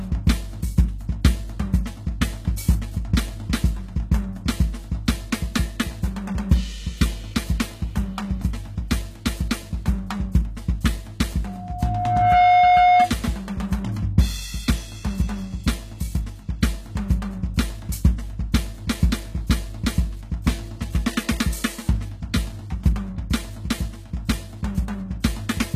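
Music whose treble sounds gritty and metallic throughout, with nothing above 14.9 kHz, likely from HE-AAC compression at a very low bitrate near 20 kbps, rebuilding highs by copying lower bands upward. From 11.45 to 13.12 s a 720 Hz tone swells over about a second to roughly 10 dB above the music, a loudspeaker feedback squeal from a microphone hearing its own speaker.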